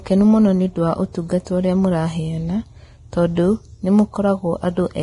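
From start to finish the speech carries heavy damage from what is likely Vorbis compression at a low rate, consistent with around 30 kbps. The encoder discards everything above 10.6 kHz and quantises the upper band so coarsely that fine detail is swapped for noise of similar energy. The result is hissy, grainy sibilance, roughened tone and softened consonant onsets. A spectrogram shows a flat ceiling at 10.6 kHz with speckled, smeared texture just below it.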